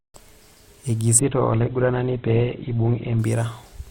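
From 1.19 to 3.19 s the adaptive stream drops abruptly to a lower bitrate. The speech loses everything above 4.4 kHz and gains codec artefacts, with no gap.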